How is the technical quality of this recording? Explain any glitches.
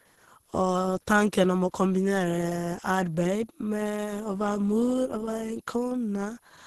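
The quality is poor, with two faults running through the whole speech clip.

Throughout, a faint high whistle wanders between about 9.88 and 10.56 kHz, roughly 40 dB below the speech. It comes from a switching supply whistle, where the power supply's burst mode falls within hearing range.

Also throughout, the speech sounds hoarse, grainy and muffled, with nothing above 12.1 kHz. The likely cause is heavy Opus compression, in a hybrid speech mode that fits a bitrate near 12 kbps.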